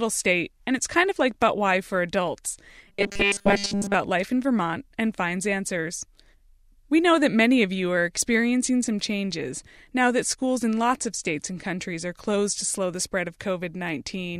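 Speech, with robotic sound from repeated short buffers between 2.88 and 3.95 s: the voice collapses into a rigid, metallic buzz fixed at 200 Hz that still tracks the words roughly. The likely cause is audio arriving too late, so the player loops a 5 ms slice for most of that stretch. Unlike a stutter, the repeats are too short to hear singly and fuse into one steady pitch.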